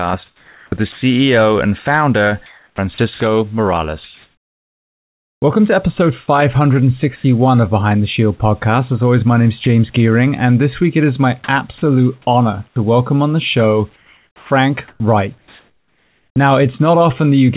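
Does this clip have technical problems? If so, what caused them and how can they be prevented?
Yes. The speech shows three kinds of voice-activity faults, heard through a G.711 A-law call path with nothing above 4 kHz, which fits a 64 kbps narrowband link.

Comfort noise in place of the background appears from 0.26 to 1.02 s, about 560 ms in total, and again from 7.16 to 7.24 s. In these pauses the real room tone gives way to a flat, featureless hiss. In the second instance the background sits about 32 dB below the loud passages and shifts by about 1 dB. This is likely discontinuous transmission: the sender stops transmitting during pauses, and the receiver synthesises shaped noise to fill the gap. Prevention: disable DTX, or use a comfort-noise generator that tracks the background spectrum more closely.

Sound dropped by the voice detector occurs at 0.92 to 1.02 s, where 100 ms of sound is lost, and at 9.64 to 9.66 s, a 20 ms loss. 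At both points the speech gives way to comfort noise. The likely cause is that the sender's detector classed quiet trailing speech as background and stopped transmitting before the sound ended. Prevention: lower the detection threshold or add a longer hangover time after speech.

Sound chopped by the voice detector runs from 2.46 to 5.42 s, with about 1.8 s replaced, and from 11.78 to 16.36 s, with about 1.76 s replaced. Across both stretches, syllables and word edges cut in and out. This is likely the detector toggling repeatedly between transmit and silence. Prevention: add hysteresis and hangover to the detector, or turn off DTX for this link.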